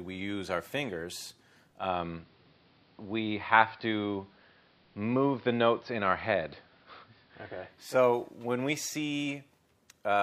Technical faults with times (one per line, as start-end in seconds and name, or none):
1.69-7.97 digital radio blending to analogue